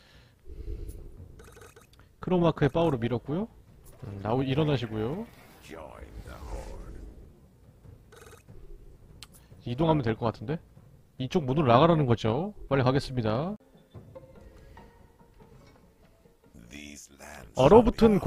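Throughout, overlap-add ripple: frames recombined with non-constant-gain overlap make the level pulse about 6 dB at roughly 400 Hz, a metallic buzz with extra tones around each note.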